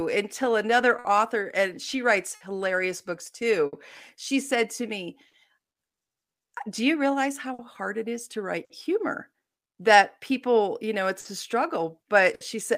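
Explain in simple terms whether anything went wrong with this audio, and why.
Several small timing faults run through this speech clip.

The main one is clock drift between sender and receiver. The sending device's clock runs roughly 4 percent slower than the receiving one. So audio arrives a little too slowly for the receiver to play. Its waiting buffer keeps running low. The receiver has to stretch the sound to avoid running out.

The fix for that drift shows up as repeated timing corrections, from 0.18 to 11.0 s. The receiver keeps adding tiny slices of sound to stay in step. Altogether it adds roughly 150 ms. Playback ends up about 1 percent slower than normal. Each edit is small and unevenly spaced. You may notice a slightly uneven pace, or nothing at all.

Between 0.99 and 5.35 s there are scattered short gaps. About four packets of sound came too late, spread out over that stretch. 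The receiver covered each hole by carrying on the last sound. Roughly 200 ms in total is patched, and the longest patch is around 70 ms. Nothing is actually lost. You may hear brief smears or small hiccups.

Finally, there are four cases of a short stall from a late packet. They happen at 7.54 to 7.61 s, 8.65 to 8.72 s, 11.20 to 11.27 s, and 12.35 to 12.43 s. The stall at 11.20 s comes right before "a struggle". The one at 12.35 s comes right after "a struggle". Each time the buffer ran empty for a moment. The receiver held the last sound for 50 ms, or 60 ms in the final case. Then it carried on from the same place. No speech is missing. A sound is just held a bit too long, sometimes with a faint buzz.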